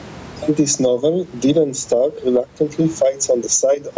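A short speech recording with gain pumping running right through it. The level keeps swinging by something like 15 dB, so everything sounds squashed. That's most likely the input gain set far too hot with a fast limiter clamping down on every peak. The room noise underneath sits well below the speech, and the call's microphone processing caps things around 8 kHz.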